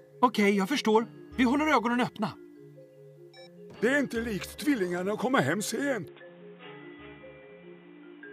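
At 6.08 s the sound abruptly turns dull and boxy and stays that way to the end. This is most likely an input switched to a poorer device, a narrower-band microphone or headset path taking over. Nothing above 3.8 kHz survives, so the spectrogram shows a hard, flat ceiling from that moment on. A new, faint background noise sits roughly 35 dB down. The waveform shows no gap at the switch, and the overall level barely changes.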